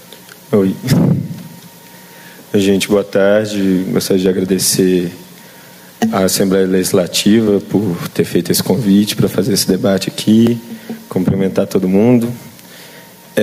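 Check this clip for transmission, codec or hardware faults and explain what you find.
Two faults show up: gain pumping across the whole clip, and one spot of audio missing between chunks.

Gain pumping runs throughout. The gain ducks by around 10 dB under every loud sound, squashing the dynamics. It's likely input gain set far too high, with a fast limiter or compressor hauling it back down each time.

Audio missing between chunks shows up at 10.47 s as a tiny skip with a hard splice and no silence. Only a few milliseconds go, likely lost while a recorder working in 3-second blocks closed one chunk and opened the next.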